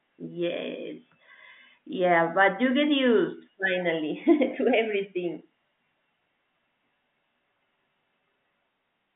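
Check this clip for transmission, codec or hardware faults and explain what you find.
Nothing to flag: the speech sits in a 150 Hz to 3.6 kHz line band with nothing above 3.8 kHz, consistent with G.711 A-law telephone coding at 64 kbps doing its normal job.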